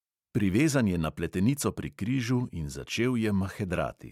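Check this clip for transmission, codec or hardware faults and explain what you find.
Nothing wrong can be heard in the signal, and the speech comes through intact and continuous with no technical defect at any point.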